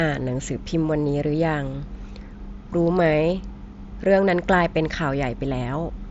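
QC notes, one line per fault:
Nothing stood out on listening to this speech, carried over a Bluetooth mSBC headset link with nothing above about 7.7 kHz.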